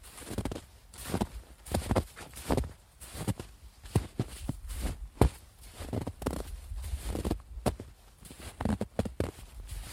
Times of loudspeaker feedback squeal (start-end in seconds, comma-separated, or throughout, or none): none